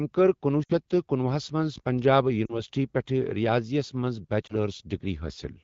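Lost AMR speech frames occur at 0.63–0.72 s after "کٔر کنۄہ", at 2.46–2.62 s between "ہَس منٛز پنجاب" and "پٮ۪ٹھ ریاضی یَس منٛز", and at 4.48–4.54 s after "پٮ۪ٹھ ریاضی یَس منٛز". Frames failed their error check, so the wideband decoder repeated the last good pitch and vocal-tract shape at falling gain. The first gap of about 60 ms and the second, about 40 ms, fade to near silence within two frames. The third, about 20 ms, is a brief dip or warble. After each, the speech returns weak or rough for a moment.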